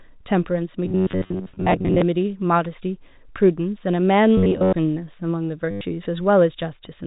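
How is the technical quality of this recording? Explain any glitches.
Two kinds of glitch disturb the speech, and they are separate from the narrow telephone band of the G.711 coding, which keeps everything below 4 kHz.

From 0.85 to 2.02 s, and again from 4.37 to 4.73 s, the speech turns into a rigid, metallic buzz pitched at 93.8 Hz that only loosely tracks the syllables. This is robotic sound from repeated short buffers. The likely cause is audio arriving too slowly, so the player keeps looping the latest snippet, and most of the real sound is skipped. A buzz at 93.8 Hz fits a buffer of about 10.7 ms.

From 5.71 to 5.81 s comes a brief stutter, lasting 100 ms. This is packet loss with the last packet repeated. The receiver replays the final packet it received until fresh data arrives. Repeating that packet over and over imposes a buzz at the packet rate, which produces the robotic stutter.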